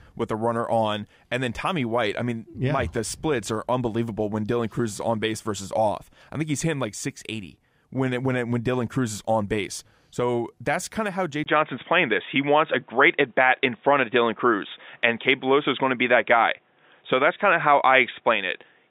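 Input switched to a poorer device at 11.44 s in this speech recording: after a 20 ms gap, everything above 3.8 kHz vanishes, the level shifts around 5 dB, and faint new hiss appears, likely from a narrower-band microphone.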